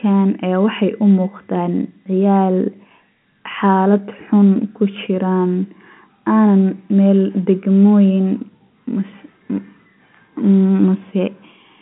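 No audible technical faults.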